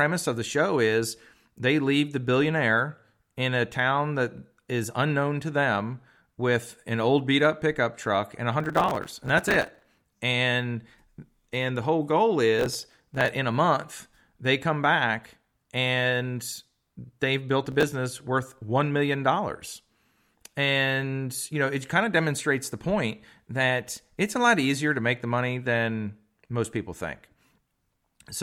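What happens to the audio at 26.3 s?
Nothing goes wrong at 26.3 s; the speech there comes through intact, with no dropout, click, distortion or other audible fault at that moment.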